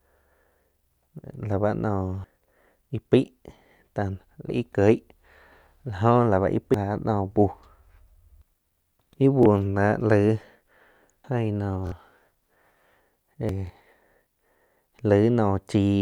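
At 2.24, 4.49, 6.74, 11.24 and 13.49 s the speech jumps abruptly, about a third of a second vanishing each time with the edges butted together. The skip at 4.49 s lands just before "ih kieg", and the one at 6.74 s comes right after "jó la báh íh". The regular spacing, matching 2.5 s chunks, points to audio missing between chunks, likely lost while a recorder or processor closed one block and opened the next.

At 9.43 to 9.46 s, 11.87 to 11.92 s and 13.67 to 13.70 s, a brief slice of sound repeats. This is Bluetooth stutter, where the receiver replays its last buffer while waiting for late packets. The first and third gaps last about 23 ms, which fits one lost packet, and the middle one lasts about 46 ms, which fits two.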